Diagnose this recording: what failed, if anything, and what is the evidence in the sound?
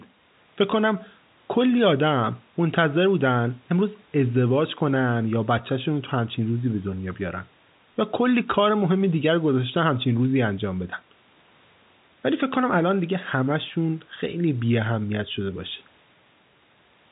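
Nothing failed here: the speech comes across as ordinary telephone audio, with the G.711 coding of a normal call keeping everything below about 3.8 kHz, and nothing else in the sound points to a problem at any stage.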